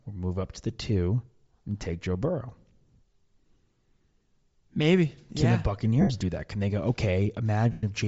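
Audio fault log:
Throughout: Bluetooth LC3 compression, likely. The upper spectrum sounds thinned and refilled with noise, giving the speech a plainly audible breathy, grainy edge. This fits LC3 at a low rate, near 32 kbps with 7.5 ms frames, discarding high-band detail and substituting noise.
6.01–6.10 s and 7.72–7.84 s: lost LE Audio frames. Gaps of about 82.5 ms and 112.5 ms (consistent with 11 and 15 missing frames) turn into a noisy smear that fades toward silence. The decoder repeats the last spectrum with scrambled signs and then fades it out.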